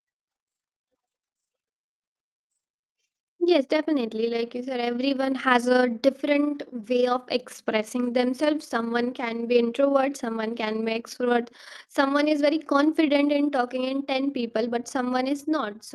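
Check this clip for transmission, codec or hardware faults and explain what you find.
One transmission fault stands out. From 1.80 to 4.44 s, just before "you said everyone has", the speech briefly sounds hurried but keeps its pitch, running about 7% fast. This is a jitter buffer speed-up: the receiver trimmed short pitch-period slices, around a fifth of a second in total, to drain excess buffered delay. The call codec adds its usual coding noise throughout, with high frequencies rolled off above 12 kHz, which fits Opus at a moderate bitrate.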